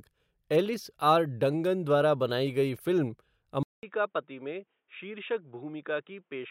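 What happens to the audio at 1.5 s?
Nothing goes wrong at 1.5 s; the audio is intact there.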